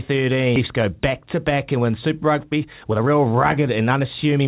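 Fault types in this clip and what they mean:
Skip ahead: At about 0.56 to 0.58 s the speech jumps straight forward with no gap and nothing filled in. Roughly a second of audio never got played, most likely dropped because later packets were already queued and waiting. The two sides of the cut sit almost directly against each other, so you lose a chunk of speech and the timeline lurches ahead rather than pausing.
Jitter buffer speed-up: From about 2.10 s to 4.40 s the speech runs at around 120% speed while the pitch stays put, so it sounds hurried rather than chipmunky. The buffer was holding more than it wanted and trimmed tiny pitch-period slices over and over to catch up, shaving off around half a second in total. Everything here sits below 4 kHz, as you'd expect from a narrowband G.711-style call path.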